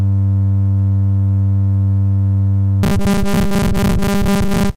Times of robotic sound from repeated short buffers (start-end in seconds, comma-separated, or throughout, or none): 2.83-4.76